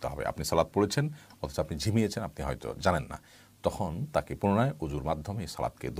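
No fault can be heard anywhere in the clip.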